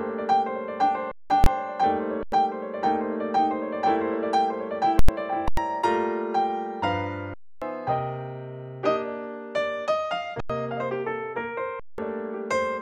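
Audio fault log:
1.12–1.30, 2.23–2.32, 5.48–5.57, 7.34–7.62, 10.40–10.50 and 11.80–11.98 s, underrun with held sample: the output buffer runs dry and the converter just holds its last value, so the sound freezes flat for about 93 to 279 ms. Material is lost in each gap (roughly a tenth to a third of a second). The 93 and 186 ms gaps fit one or two 4096-sample buffers at 44.1 kHz.
1.44–1.46 and 4.99–5.09 s, invalid numbers at full scale: a calculation blows up into infinite or invalid values that get clamped to maximum level for a whole block. The 23 ms block lands as one sharp bang. The 93 ms block gives a very loud pop going in and another coming out, with nothing audible between them.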